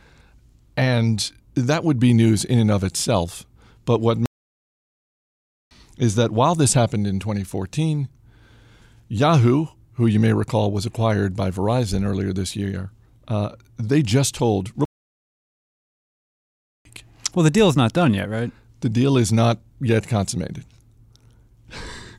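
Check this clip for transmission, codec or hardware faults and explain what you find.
Two playback stalls interrupt this speech. From 4.26 to 5.71 s the audio cuts to silence in mid-flow for about 1.45 s, and from 14.85 to 16.85 s it drops out again for 2.0 s before resuming. Each gap is dead silence rather than noise or distortion. The likely cause is the player being starved of data, or its audio thread being blocked, so nothing reached the output until it recovered.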